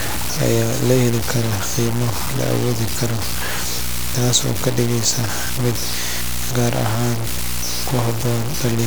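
From start to end the speech sits on a video or display buzz at a 60 Hz field rate, strong enough to sit only about 10 dB below the speech. It comes from a screen or video cable coupling its picture timing into the audio path. Unlike mains hum, which is a fairly smooth low tone, this is a harsh, pulse-like buzz with a spray of hash riding above it, and it never varies with the speech.

Also running through the whole clip is heavy, grainy distortion that tracks the speech, almost as loud as the speech itself. Quiet stretches turn gritty and the faintest parts break into sputtering between a couple of steps or drop to silence. The likely cause is low bit depth without dither, with the signal truncated to something like 4 bits. Dithered low bit depth gives a steady hiss instead; here the error moves with the sound.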